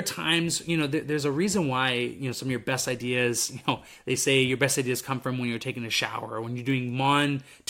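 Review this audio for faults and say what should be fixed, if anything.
A bit error spike at 6.70 s, just after "a shower when you're", gives one sharp tick. A single flipped bit pushes one sample to about -27 dBFS, a thin one-sample needle on the waveform and a full-height vertical line on the spectrogram. Using error-checked memory and links would prevent it.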